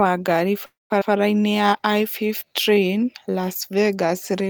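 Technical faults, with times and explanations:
0.65–0.92 s, call audio freeze: the sound hangs, with the last fragment stretched into a brief fading buzz and then about 180 ms of silence. The likely cause is delayed packets emptying the jitter buffer. Nothing is lost. Playback resumes where it stopped, now running about 0.25 s later.
1.00–1.03 s, skip ahead: playback jumps forward across a tiny 10 ms join, dropping roughly a sixth of a second of speech. The stretch was discarded, in transit or by an overfull buffer, while later audio was already queued, so the two sides meet almost directly.
1.42–3.05 s, jitter buffer slow-down: speech runs at 91% speed with unchanged pitch, adding 158 ms overall. The receiver was rebuilding its reserve by repeating single pitch periods and bits of pauses many times in a row, which makes sounds drawn out.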